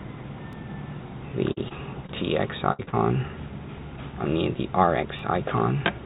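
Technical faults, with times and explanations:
0.53 s and 5.19 s, block of digital silence: At each point the audio drops to silence for about 2 ms and then returns, with no fade in or out. Both edges are abrupt steps, so the result is a single sharp tick. A packet loss would be filled with continued sound, but here the gap is true silence, as when an output buffer isn't filled in time. It is far too short to be heard as a hole.
1.52–1.58 s, 1.68–1.72 s, 2.06–2.10 s, 2.83–2.89 s and 2.89–2.94 s, short concealed packet loss: The gaps are roughly 20 to 40 ms each and never reached the decoder in time. The receiver filled each one by extending the previous sound, following its pitch or shaping noise, then blended back into the real signal. Each gap is heard as a brief smear or wobble rather than a click or silence. The last two run back to back.
2.72–2.81 s, burst of packet loss: About 60 ms went missing in one run. 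That is longer than the single losses around it, so the concealment had to stretch the last sound further and fade it as the gap went on. What comes out is a held buzz or hiss that sags in level before the audio jumps ahead, with the stretch in between lost. The fading tail is what separates it from the short smears. The whole clip is band-limited to 4 kHz, which fits a narrowband telephone codec.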